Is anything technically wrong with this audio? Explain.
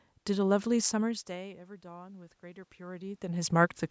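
Yes. From 1.04 s to 3.79 s there is automatic gain rising. After the level arriving at the microphone fell by about 21 dB, consistent with the talker moving back around 1 s, the call's automatic gain control judged the input too quiet and slowly raised its gain by about 6 dB. Because the gain acts on everything, the voice and the room noise swell together across those seconds, rather than the voice alone returning.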